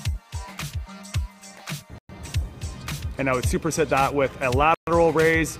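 The audio cuts to silence twice, at 1.98 s for about 108 ms and at 4.74 s for about 129 ms, then resumes. These gaps are likely Bluetooth stalls from a briefly emptied buffer.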